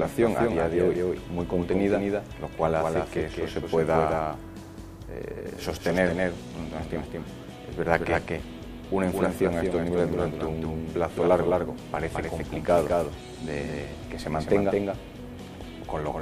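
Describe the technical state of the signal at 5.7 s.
At 5.7 s a doubled audio track is present, as throughout: a full-band copy trails about 200 ms behind, roughly 5 dB quieter, likely from an out-of-step second capture path.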